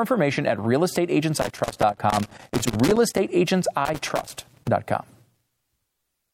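From 1.39 to 3.19 s and again from 3.85 to 4.68 s, the speech breaks up with loose connector crackle: a bad contact intermittently opening and closing, chopping the signal and producing irregular bursts of scratchy crackle layered over the speech.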